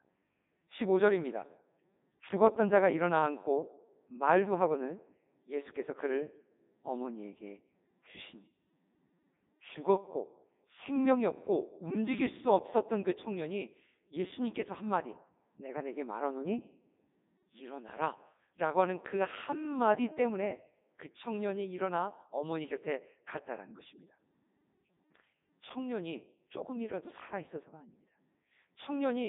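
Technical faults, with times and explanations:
Throughout, Codec 2 vocoder: the speech has been rebuilt from pitch, voicing, energy and a coarse spectral envelope, then resynthesised as sine waves, so it sounds robotic and buzzy with heavy codec damage. The detail fits Codec 2's highest 3.2 kbit/s mode. A spectrogram shows a band from about 150 Hz to 3.7 kHz, nothing above 3.8 kHz, and overly regular harmonic stripes. The waveform no longer follows the original shape.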